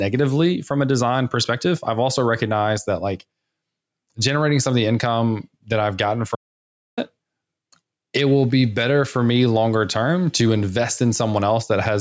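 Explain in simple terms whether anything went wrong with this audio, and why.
Two things went wrong. First, the microphone level was likely set far too high, so a fast automatic limiter keeps pulling it down whenever the speech gets loud. This is called gain pumping: throughout the clip loud and soft parts end up closer in level, and the speech sounds squashed.

Second, from 6.35 to 6.98 seconds there is an audio dropout to silence, likely because the microphone's signal was briefly lost while recording continued. For about 0.6 seconds the sound cuts to complete silence with no room noise, and whatever was said then is gone.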